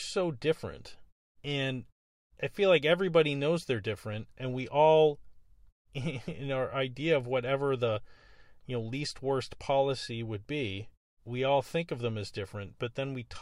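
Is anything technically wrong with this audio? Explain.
No, there is nothing technically wrong with this speech recording.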